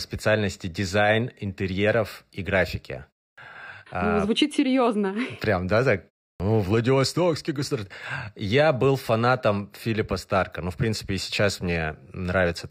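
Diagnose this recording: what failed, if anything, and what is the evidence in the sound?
Clipped start after a pause at 3.34 s and 6.36 s: after short pauses of 0.3 s and 0.34 s, the speech resumes abruptly, with its first 36 ms and 39 ms missing. The playback device slept through the silence and woke too late.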